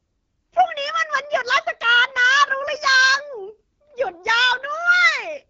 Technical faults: AMR wideband (HD Voice) codec

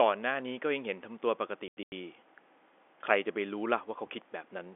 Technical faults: packet loss filled with silence

